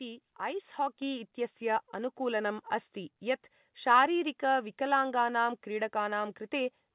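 At 1.02 s the whole sound abruptly gets louder by about 6 dB, with the speech and the background noise stepping up together rather than the talker raising their voice, just before "इत्यस्य अनुकूलनम् अस्ति यत्". This is a microphone volume step-up: the call software judged the input too quiet and raised the device's input level in one step, so everything captured after that instant is louder. The narrowband call path, with nothing above 4 kHz, carries the jump through unchanged.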